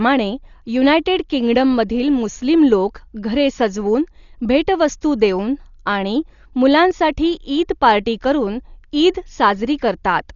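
The speech is dull and cut off above 7 kHz throughout, with rough, fluttering noise around voiced tones, likely from heavy Dolby Digital compression at a bitrate near 40 kbps, where starved frequency lines are filled with dither noise rather than left as the watery holes of MP3-style codecs.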